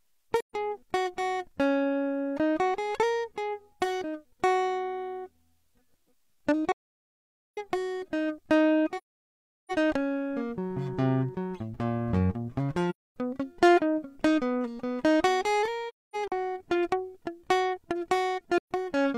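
At 0.40, 6.72, 8.97, 12.90, 15.88 and 18.57 s the music drops out in AAC frame loss with muting: whole coded frames went missing and the decoder zeroed their spectrum. Gaps run from 0.13 s to 0.85 s; the one at 15.88 s is broken up, mostly one stretch of around 0.3 s. The overlapping windows fade each hole out and back in. A spectrogram shows full-band blank columns with soft edges; the waveform tapers to flat silence.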